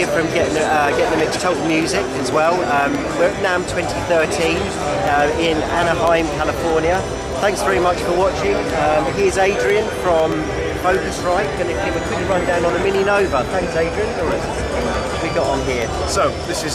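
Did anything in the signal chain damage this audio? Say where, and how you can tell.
Yes, at the driver or buffer stage: periodic USB or driver dropouts. From 0.07 s to 16.70 s there are regular ticks every 0.125 s, eight per second and around 150 in all. Their strict spacing points to a background task repeatedly stalling the USB bus or audio driver. Each stall drops a fraction of a millisecond of audio and leaves a gap of silence, and each short gap is heard as a tick wherever there is signal.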